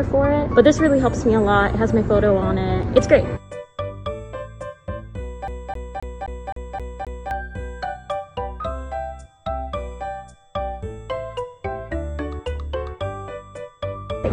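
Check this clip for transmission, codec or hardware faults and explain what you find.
One hardware fault is present: the CD is stuck on one turn from 5.48 to 7.31 s. A scratch keeps knocking the laser back one track at the same point on each revolution, so playback never advances past it. The result is a single 262 ms slice of sound heard seven times over, each pass cut off by a brief mute at the jump, giving the rapid, evenly spaced stutter of a skipping disc.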